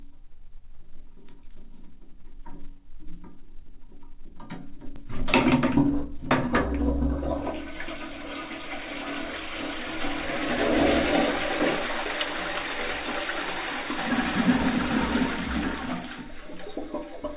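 Right around 4.96 to 4.98 s there's a skip ahead. Roughly 400 ms of the sound just never plays. It was most likely thrown away in transit or when the jitter buffer overflowed with later audio already queued. Nothing fills the hole, so the audio on either side gets butted together with no gap, and you hear an abrupt jump forward rather than a dropout or a silence.

Then from 5.85 to 8.82 s you get a jitter buffer speed-up. The buffer was holding more audio than it wanted, so to claw back the delay it kept snipping out tiny pitch-period-sized pieces, something like 150 ms in total over that stretch. Playback runs at about 105% speed with the pitch unchanged, so the sounds in there come across slightly rushed and crowded together. All of it sits in that narrow G.711 call-path sound, with nothing above 4 kHz.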